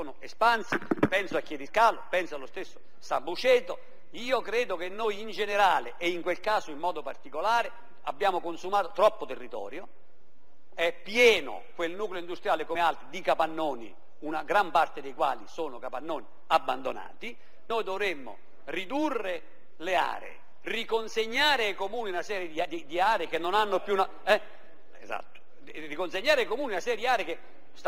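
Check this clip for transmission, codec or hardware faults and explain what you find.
There's one problem here: short skips at 12.75 s, 17.70 s and 22.65 s, spaced about five seconds apart. It sounds like audio missing between chunks. Each time, around 50 ms just vanishes and the sound on either side is butted straight together, so you hear a small jump rather than a gap. The steady spacing likely comes from the recorder or processor handling the audio in 5-second blocks and dropping a sliver each time it rolls over to the next one.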